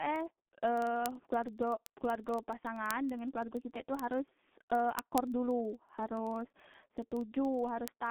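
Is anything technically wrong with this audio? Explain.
Yes, two faults. G.723.1 codec damage runs throughout: its 30 ms frames and a bitrate that points to about 6 kbit/s leave nothing above 3.9 kHz, so the speech sounds muffled, hoarse and smeared. Word clock ticks recur from 0.11 to 8.07 s, about twenty per second. An unlocked receiver clock, off by roughly 500 ppm, slips a single sample at each one, producing sharp, uneven ticks.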